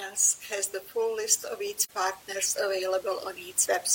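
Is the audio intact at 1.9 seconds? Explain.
No, 1.9 seconds falls inside an AAC frame loss with muting from 1.83 to 1.91 s. The decoder received no data for that stretch and zeroed its spectrum; the gap of about 43 ms fits a single lost frame. Because neighbouring windows overlap, the speech fades down and back over roughly 80 ms, leaving a brief dip that takes in the room noise too, which sits about 24 dB below the speech.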